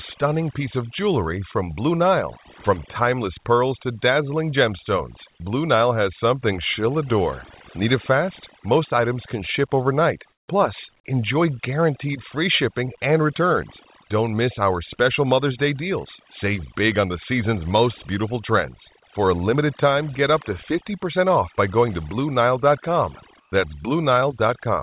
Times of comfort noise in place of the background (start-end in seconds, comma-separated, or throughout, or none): 10.32-10.48, 23.40-23.52